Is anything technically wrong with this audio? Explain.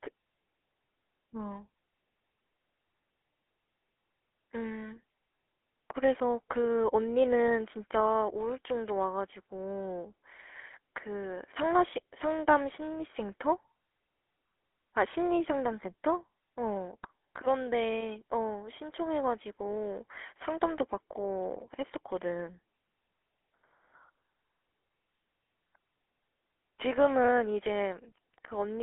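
Yes. Throughout the speech there is a buzzy, gravelly roughness with nothing above about 3.8 kHz, the mark of the GSM full-rate codec. It models the vocal tract as a filter and drives it with a regularly spaced pulse train, keeping only every third excitation sample. That coarse excitation produces the grainy buzz, clearly audible here. The narrow 300 to 3400 Hz telephone band and the 13 kbps rate fit the codec.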